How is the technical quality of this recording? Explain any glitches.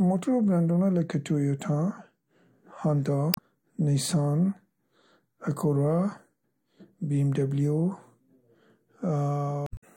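The speech recording has two glitches, both from damaged data in a compressed stream, at 3.31 to 3.39 s and 9.64 to 9.84 s. Corrupted bytes there make the decoder misread frames and lose sync while it hunts for the next valid header, producing a short chirp, squawk, click or hole in place of the speech.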